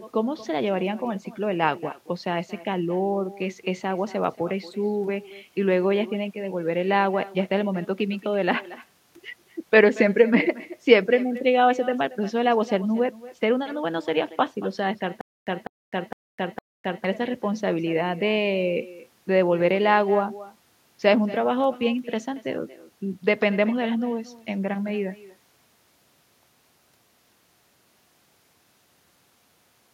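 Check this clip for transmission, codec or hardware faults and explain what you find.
Two faults are present: an uncancelled echo running through the whole recording, and a stutter with silent gaps in the middle.

Echo with no canceller, throughout: the far end's loudspeaker output reaches its microphone and nothing strips it out, so the speech returns after the network round trip. Each phrase is trailed, around a fifth of a second later, by a thinner copy about 18 dB down.

Stutter with silent gaps, from 15.21 to 17.04 s: the stream likely stalled and, on each retry, replayed its last fragment before running dry. A 200 ms burst repeats four times at a steady 458 ms period, separated by 258 ms of digital silence, and the audio due in that stretch is lost.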